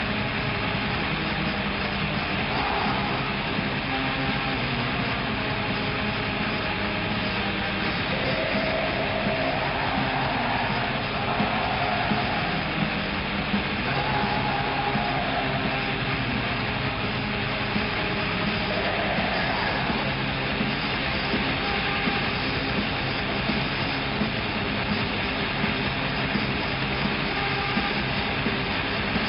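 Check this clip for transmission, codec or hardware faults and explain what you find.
No faults turn up anywhere in this clip.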